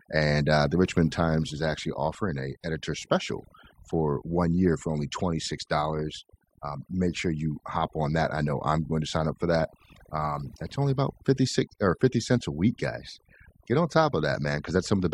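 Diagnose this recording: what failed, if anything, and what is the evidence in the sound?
The processing is at work on the speech from start to finish. Between phrases the background drops to near silence dotted with twinkling specks, and softer parts of the voice are lost along with the noise. This is overdone noise removal at the processing stage. A noise reducer set too aggressively is switching individual frequency bands down or off whenever they sit close to its noise estimate. The leftover isolated bands make the specks, and the low-level parts of the speech are stripped away with the noise.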